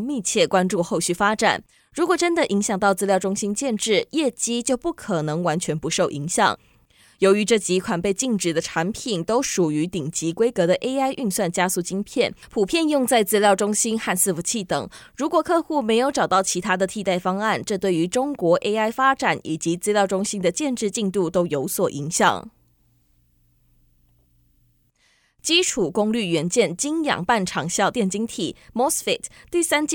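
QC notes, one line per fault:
No faults found in the speech. Nothing calls for a timestamp or a flag.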